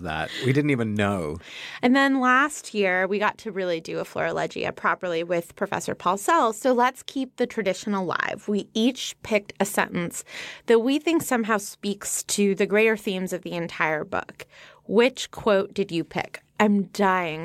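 Nothing in this recording stands out as a technical fault, so there's no problem here to point to.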